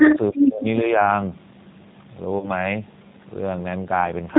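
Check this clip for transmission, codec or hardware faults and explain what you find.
Two faults stand out in this speech clip: G.729 codec coding across its whole length, and one concealed packet-loss event just past the halfway mark.

The G.729 codec damage is plainly audible throughout. The encoder rebuilds the signal from a vocal-tract filter, a pitch predictor and a handful of pulses per half frame, which fits an 8 kbit/s stream. Everything above 4 kHz is gone, and the speech carries a slightly rough, synthetic edge. This differs from plain band-limiting, which dulls the sound without adding that buzzy, modelled texture.

VoIP packet loss concealed by the speech codec occurs from 2.39 to 2.50 s. About 30 ms of audio went missing, which fits three lost 10 ms frames. The decoder filled the gap by extending its last pitch and filter with falling gain, so the sound smears into a brief fading buzz or coloured noise rather than a click or hard silence, as a plain dropout would give. 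Because each frame predicts from the previous one, the speech stays weak or distorted until about 2.50 s, after packets resume.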